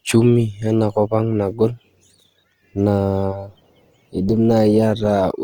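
Speech, likely encoded with Opus compression in its music mode at a low bitrate consistent with 24 kbps. Starved bands are refilled with folded or noise-like energy, so the speech sounds plainly rough and grainy throughout, with tonal parts turned noisy, though content still reaches about 20.2 kHz.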